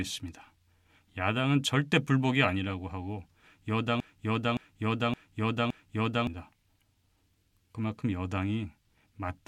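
At 4.00 s the speech falls into a broken-record loop. A fragment about 0.57 s long plays four times, back to back, with no change between passes. The loop runs until 6.27 s. It sounds like a stuck, stuttering repeat with a fixed rhythm. The speech that belonged in those 2.27 s never plays. Normal speech resumes after 6.27 s. The likely cause is a stall in the player, encoder or stream, which kept resending the last piece it held.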